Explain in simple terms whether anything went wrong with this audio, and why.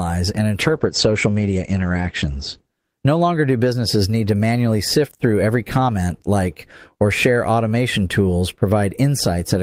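A call bitrate drop runs from 0.63 to 3.43 s. The connection briefly had less room, so the speech was squeezed into far less data. It sounds rougher and muffled, with the crisp sounds above 8 kHz cut off, until quality returns.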